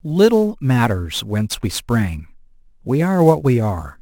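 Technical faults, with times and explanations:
Throughout, sample clock jitter: the converter's timing wobbles by something like 10 microseconds, so each sample lands a little early or late and picks up an error proportional to how steeply the waveform is moving. The speech carries a gritty hiss about 25 dB below it, strongest on loud passages and sibilants. Unlike steady background noise, this hiss drops away completely in the pauses.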